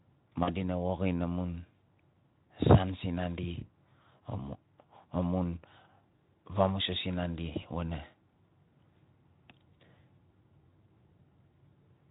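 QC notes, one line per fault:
0.44–0.50 s, VoIP packet loss concealed by the speech codec: about 40 ms of speech went missing, which fits two lost 20 ms frames. The Speex decoder, otherwise working with only light coding damage at what sounds like roughly 15 kbps, filled the gap by repeating its last pitch and spectral envelope at falling gain. The result is a brief, smeared buzzy tone or coloured noise that fades, and the speech stays weak or distorted for tens of milliseconds or more after packets resume.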